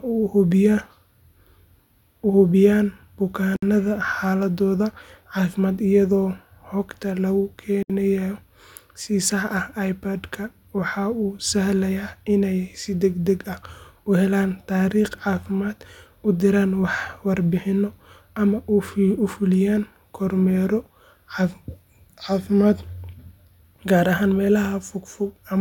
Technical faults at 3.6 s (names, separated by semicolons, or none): gap at a join of encoded pieces